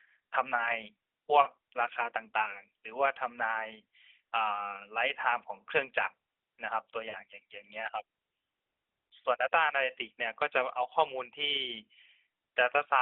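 At 1.42 to 1.47 s and again at 7.10 to 7.17 s, the speech smears into a brief drawn-out warble and dips, then returns rough for a moment. These are lost AMR speech frames. About 40 ms, fitting two 20 ms frames, went missing each time, and the narrowband decoder bridged them by repeating its last good pitch and vocal tract settings at falling gain.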